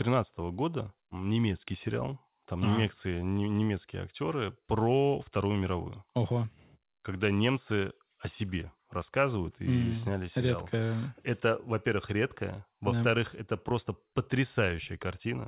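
No technical faults can be heard in this speech.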